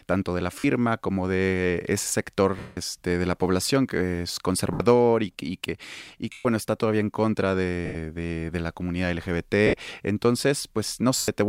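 Speech broken by seven dropouts from lost LE Audio frames, at 0.59 s (50 ms), 2.59 s (180 ms), 4.73 s (70 ms), 6.32 s (130 ms), 7.86 s (90 ms), 9.67 s (60 ms) and 11.18 s (100 ms). In each gap the LC3 decoder conceals the missing audio by repeating the last spectrum with randomised phase signs, so the sound becomes a brief noisy smear. In the longer gaps it fades toward silence. The gap lengths fit 10 ms frames, and the codec coloration is light.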